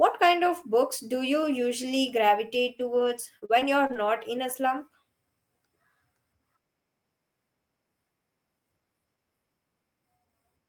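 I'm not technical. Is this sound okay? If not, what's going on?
No. From 2.67 to 3.97 s, between "books do you usually" and "not in a slump", there's repeated packet loss (robotic sound). Six brief holes are patched by stretching the preceding sound, giving a choppy stutter that recurs rather than one single dropout.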